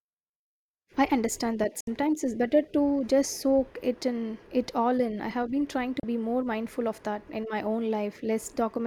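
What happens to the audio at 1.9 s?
The speech cuts out in a digital broadcast dropout from about 1.80 to 1.88 s, just after "I understand that" and before "it's better to just". The receiver stopped getting usable frames and muted until good ones arrived. Roughly 64 ms of programme is lost, which points to two dropped frames, behind a fast fade of about 3 ms. Unlike packet-loss concealment, nothing is smeared or repeated to fill the gap. It is a clean silent hole, then the sound resumes.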